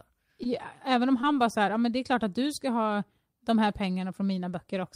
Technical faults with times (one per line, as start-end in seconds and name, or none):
0.43-0.47 short concealed packet loss
1.21-1.25 short concealed packet loss